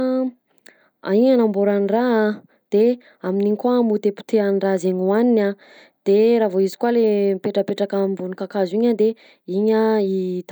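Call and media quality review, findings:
Nothing stood out on listening to this speech recording.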